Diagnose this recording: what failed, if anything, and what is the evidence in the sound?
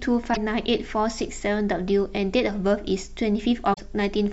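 The compressed stream carrying this speech has damaged data in two places, a fault at the codec and storage stage. Corrupted bytes reach the decoder, which misreads those frames, loses sync and hunts for the next valid frame header before resuming clean output. Each corrupt stretch produces a short non-speech chirp or blip. The first runs from 0.30 to 0.37 s, and the second, slightly longer, from 3.70 to 3.79 s.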